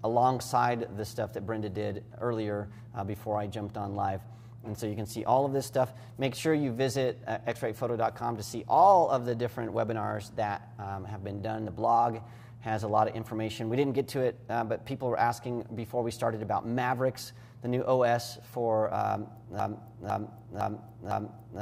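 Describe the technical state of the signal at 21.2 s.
A broken-record loop is running at 21.2 s; it began at 19.6 s and lasts to the end. A 0.51 s fragment repeats exactly, back to back, four times, most likely because the player or stream stalled and kept resending its last buffer, so the intended audio is lost.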